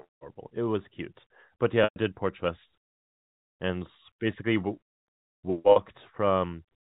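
Telephone-band speech, passed through G.711 coding that stops everything above 4 kHz, has packet loss with pitch repetition at 1.84 s (120 ms) and 5.72 s (40 ms). The short gap holds a buzzy, repeated pitch period, and the longer one fades to silence. A plain dropout would instead cut abruptly to silence.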